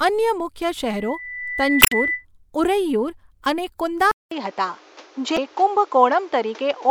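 Speech with three distinct technical faults. Just after "અન્ય મુખ્ય", at 0.86 s, a loudspeaker feedback squeal appears: a steady 2 kHz tone swells over roughly a second until it sits a few decibels above the speech, then stops at 2.25 s. That is the signature of a microphone re-amplifying its own loudspeaker output at the one frequency where the loop gain exceeds unity. Damaged data in the compressed stream produces short glitches at 1.79 to 1.93 s, inside the squeal, and again at 5.34 to 5.38 s. At each point the decoder has misread corrupted frames and lost sync. From 4.11 s to the end, after a gap of about 200 ms, the sound turns duller, with nothing above 7.6 kHz. The level shifts by a few decibels and a new noise floor sits roughly 30 dB under the speech. This is likely the input being switched to a poorer device partway through the recording.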